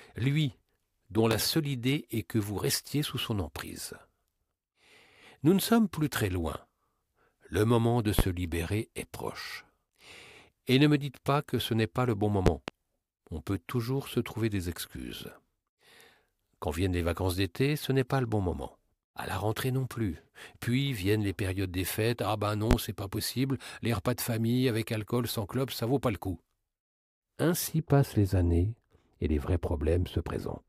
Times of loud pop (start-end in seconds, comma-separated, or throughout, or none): 1.31-1.35, 8.19-8.22, 12.46-12.71, 22.71-22.75